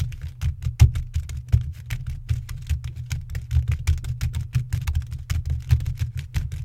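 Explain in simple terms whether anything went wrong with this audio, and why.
Nothing went wrong with this recording on the technical side: the sounds in it come through steadily, with no dropouts, glitches or interruptions anywhere along the way.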